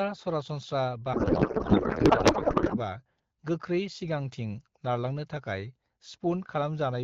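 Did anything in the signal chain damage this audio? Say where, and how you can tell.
Yes. At the codec stage there is a codec payload misread. From 1.13 to 2.79 s the decoder unpacked the AMR wideband frame bits with their fields misplaced, which fits octet-aligned AMR being read as bandwidth-efficient. The speech becomes garbled noise and warble that barely tracks it.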